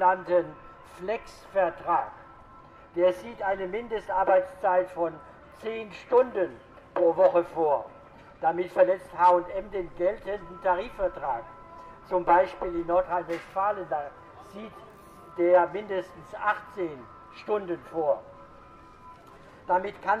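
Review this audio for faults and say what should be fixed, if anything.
Nothing needs fixing; no faults turned up anywhere.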